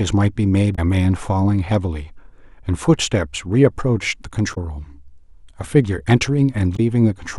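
Brief blips break the speech at 0.72–0.79, 4.51–4.58 and 6.73–6.80 s: damaged data in the compressed stream, where the decoder misreads corrupted frames and loses sync.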